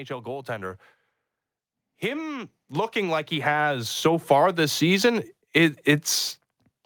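From 2.01 to 4.85 s there's automatic gain rising: the level control judged the input too quiet and eased up about 11 dB, lifting speech and background together.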